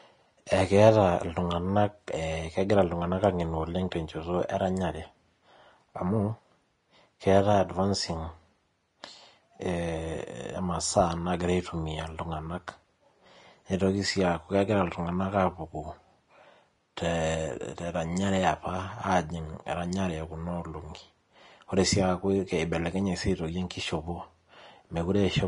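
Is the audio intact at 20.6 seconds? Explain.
No. At 20.6 s, as across the whole speech clip, nothing sounds above 10.6 kHz, and the treble that remains is hissy and grainy, with roughened tones and smeared consonant attacks. This is likely Vorbis compression at a low bitrate, around 33 kbps. The codec keeps a smooth spectral envelope but quantises the upper detail so coarsely that it turns into noise of similar energy. A plain low-pass filter would remove the top cleanly instead of leaving this granular hiss.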